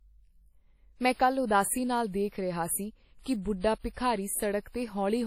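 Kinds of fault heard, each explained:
WMA compression: The speech has a ringing, washy quality, with a hiss that rises and falls along with the signal and no content above about 15.8 kHz. The likely cause is a heavily compressed Windows Media Audio stream, which fits a low bitrate around 32 kbps. A basic transform encoder with long blocks smears its quantisation noise across tens of milliseconds, and at that rate it discards the weaker spectral lines.
pre-echo: Three sharp attacks arrive softened, each led by a brief hiss that comes before the sound itself: 46 ms starting at 3.21 s, 53 ms from 3.79 s, and 41 ms from 3.93 s. The transform codec spreads its quantisation noise evenly through each block. When an attack lands late in a block, noise meant for the loud onset also fills the quiet stretch just before it.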